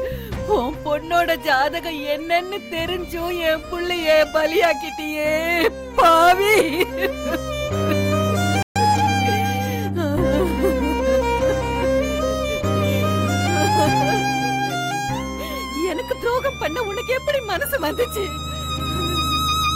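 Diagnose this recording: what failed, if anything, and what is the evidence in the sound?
Playback stall, 8.63 to 8.76 s: output falls silent mid-flow for 133 ms, likely the player starving of data or its thread being blocked.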